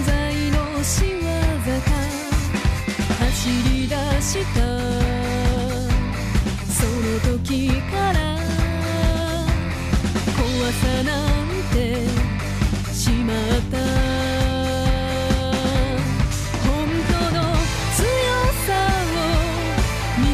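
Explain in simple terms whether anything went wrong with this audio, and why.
Nothing went wrong: the recording's signal is technically intact throughout, with no audible technical faults anywhere in it.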